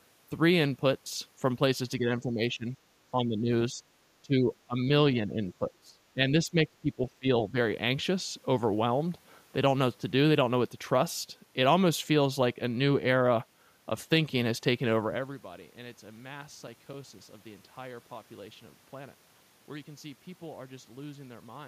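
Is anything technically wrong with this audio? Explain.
Yes, two things. From 1.99 to 7.56 s the speech dips in a cluster: 1.99–2.76, 3.12–3.5, 3.71–3.83, 4.22–4.5, 4.66–4.9, 5.2–5.42, 5.59–7.27 and 7.51–7.56 s. Drops range from a few dB to about 25 dB, deepest in the long 5.59–7.27 s stretch. The likely cause is speech suppressed in double talk: an echo canceller couldn't separate this talker from the far end's echo and ducked everything.

Then between 15.9 and 18.2 s there are CD scratch ticks, ten very short clicks of a few milliseconds each, about four a second. That's a disc blemish coming around once per revolution, with the player concealing samples it couldn't recover.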